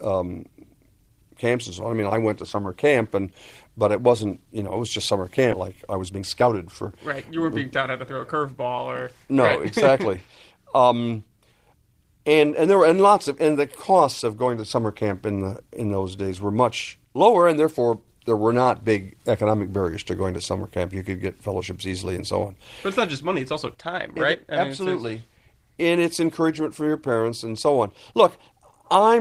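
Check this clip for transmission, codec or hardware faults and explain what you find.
Two transmission faults sit close together early in the speech.

Skip ahead at 5.52 s, right after "it was just summer". Audio was dropped, in transit or by an overflowing jitter buffer, while later audio was already waiting, so about half a second was thrown away and playback jumped straight to the next waiting audio with no fill. The two sides are spliced almost directly, so the sentence lurches forward and a chunk of speech is simply missing.

Jitter buffer speed-up from 5.61 to 8.47 s. The buffer still held more delay than it wanted, so the receiver trimmed many tiny slices of one or a few pitch periods in quick succession, removing roughly 300 ms in total. Speech runs at about 109% of normal speed with the pitch unchanged, giving a rushed, compressed delivery across those three seconds.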